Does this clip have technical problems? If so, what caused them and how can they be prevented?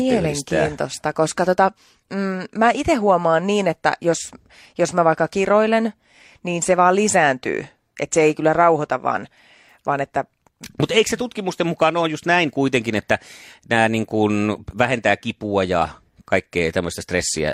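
No, there are no technical problems to address here.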